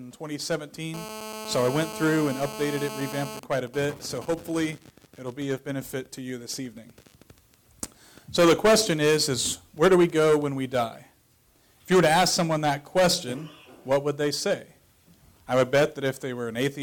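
From 0.94 to 3.40 s the audio carries GSM phone buzz, a hard, raspy tone at 217 Hz with many harmonics, sitting about 12 dB below the signal. A nearby 2G phone in a call is pulsing its transmitter 217 times a second, and the audio circuitry rectifies those bursts. From 3.43 to 4.64 s this changes to GSM signalling bursts, even ticks with a longer 217 Hz buzz twice a second, roughly 20 dB down. The phone is still in the call but sending only sparse burst groups while its user is silent.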